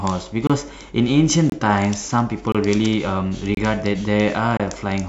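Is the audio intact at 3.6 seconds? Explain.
No, a gap between chunks falls at 3.55 to 3.57 s: about 25 ms of silence inserted at a 1-second chunk join, heard as a brief hard-edged hole.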